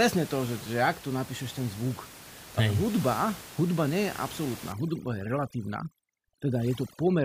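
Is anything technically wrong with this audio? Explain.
Yes. From about 4.72 s to the end at 7.25 s, the background drops and breaks up into twinkling, warbling specks. This is overdone noise removal: an over-aggressive reducer cuts whole frequency bands near its noise estimate, taking quiet speech detail with them. Before that point, room noise sits about 16 dB below the speech.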